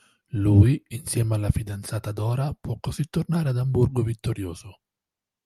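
Nothing technical goes wrong anywhere in this short speech recording, so there's nothing here to flag.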